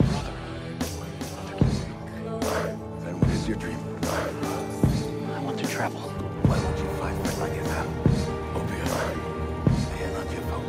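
No technical faults can be heard anywhere in the recording.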